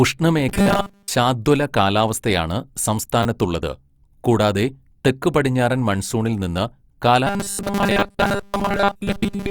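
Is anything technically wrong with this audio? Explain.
Yes, there are two kinds of trouble here, and they show up a couple of times each.

First, robotic sound from repeated short buffers, from 0.49 to 1.11 s (it clears just before "ശാദ്വല കാലാവസ്ഥയാണ്") and again from 7.27 s right to the end. The speech goes stiff and metallic, with a flat buzz at 200 Hz riding on it. That pitch fits a 5 ms chunk being looped, likely because fresh audio was arriving late, so most of the stretch is replayed material rather than real speech.

Then there are two repeated buffers, at 3.23 to 3.25 s and 8.00 to 8.02 s. Each is a tiny stutter or click where a short piece of roughly 10 ms, which fits a 10 ms buffer, plays again back to back with hard joins, because the next block didn't show up in time. About 20 ms of real audio gets skipped each time. The second one lands inside that robotic tail.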